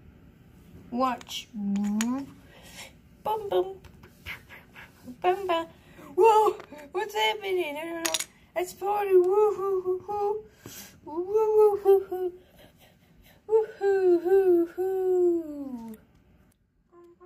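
Nothing stood out as a technical problem anywhere in this recording.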